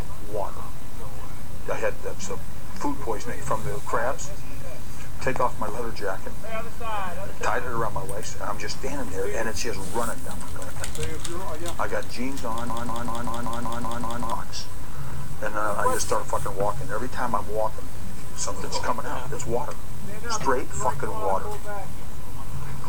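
At 12.7 s the player or stream likely stalled and kept resending the last fragment it held, a broken-record loop: a 0.19 s slice of sound repeats exactly, eight times back to back, until 14.32 s, and the audio meant for that span never plays.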